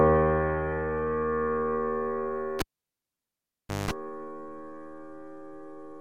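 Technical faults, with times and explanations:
2.59–3.91 s, cable pulled and plugged in: a pop, about 1.27 s of near silence, then 0.19 s of 50 Hz mains buzz as only the tip touches, and a second pop as sound returns. The waveform shows two spikes around a flat gap. The spectrogram shows vertical broadband lines with 50 Hz harmonics between.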